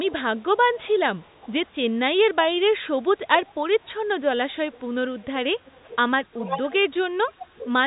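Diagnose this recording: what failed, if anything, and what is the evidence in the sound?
Echo leak in call processing: a faint copy of the speech trails it by 347 ms from 0.05 to 1.67 s, from 3.45 to 3.91 s, and from 4.72 to 7.71 s. It is loudest in the last span, about 15 dB below the speech, against roughly 25 and 30 dB earlier. The likely cause is a far-end loudspeaker whose echo canceller let part of its microphone pickup through. On a spectrogram, each syllable's pattern reappears 347 ms later, fainter and cut off at 3.8 kHz like the rest of the G.711 audio.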